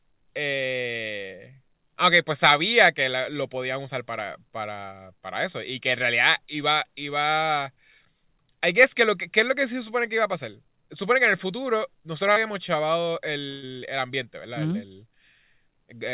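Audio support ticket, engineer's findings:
Short concealed packet loss, 12.32 s. Brief smear of about 40 ms. Jitter buffer/decoder concealment: late or lost packet, gap patched by extending the preceding sound, then crossfaded back into received audio.

Burst of packet loss, 13.50–13.64 s. About 120 ms of sound missing, replaced by a held, fading continuation, resuming at "el ambiente". Consecutive packets lost or late; concealment stretched and attenuated across the gap. Call path band-limited to 4 kHz, consistent with G.711 mu-law at 64 kbps.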